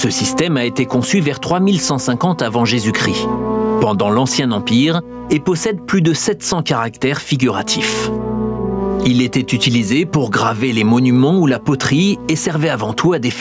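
From start to finish the level swings by around 20 dB, with everything squashed together. This gain pumping likely comes from gain set far too high, with a fast limiter repeatedly clamping it down.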